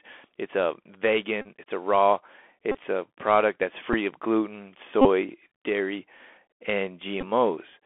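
Throughout, the speech sounds dull and boxed in, with scratchy s sounds and a granular hiss. That is the Bluetooth CVSD headset codec, whose one-bit, step-adapting coding limits the band to about 300 Hz to 3.4 kHz.

A short buzz near 267 Hz cuts in at 1.41–1.47 s just before "it's a raw", at 2.72–2.77 s, at 3.93 s between "a product that's" and "of gluten", at 5.01–5.07 s after "of gluten", and at 7.21–7.24 s. This is a Bluetooth headset packet repeated: lost voice packets were replaced by replaying the last one every 3.75 ms.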